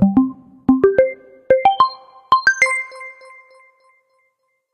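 Everyday sound, opening with an adaptive stream starting at a low bitrate: from 0.0 to 2.0 s the treble is thin and smeared with codec artefacts, fitting a 20 kbit/s HE-AAC start. At 2.0 s it jumps seamlessly to fuller quality, like 96 kbit/s AAC-LC, though still empty above 14.9 kHz. Unlike a rebuffer, there is no gap.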